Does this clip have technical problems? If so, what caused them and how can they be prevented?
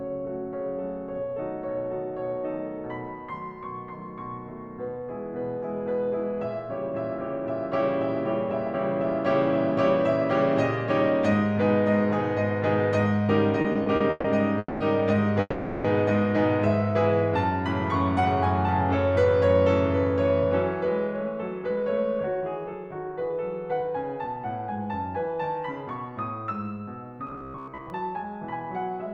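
Yes. Several network-delay faults affect this music clip.

Repeated stalls (stutter) run from 13.61 to 14.26 s. Packets kept arriving late, so the jitter buffer emptied five times. The receiver stretched the last sound to fill 270 ms in total, with the longest wait lasting 140 ms. Nothing is lost, but the music drags and hiccups. A larger or adaptive jitter buffer would absorb these uneven arrivals.

A call audio freeze occurs at 14.58 to 14.82 s and again at 15.40 to 15.86 s. The music holds on its last sound for 220 ms and then 440 ms, each ending in about 20 ms of silence, and then resumes where it stopped. The likely cause is packets held up in transit long enough to drain the buffer. Prioritising audio traffic with QoS and avoiding congested links would prevent these delays.

A jitter buffer speed-up runs from 21.62 to 24.37 s. After a backlog built up, the receiver trimmed many tiny pitch-period slices, about 150 ms in total. 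The music plays at 106% speed without a pitch change, so the tempo is audibly rushed and unsteady. Limiting how fast the buffer drains back to its target would keep the tempo even.

Robotic sound from repeated short buffers appears from 27.27 to 27.90 s. Most of the audio in that span is a repeated fragment, which imposes a rigid 66.8 Hz metallic buzz. That rate fits a loop of about 15 ms. Fresh audio likely arrived too seldom, so the last short buffer kept replaying. Steadier delivery, or concealment that fades out instead of looping, would prevent it.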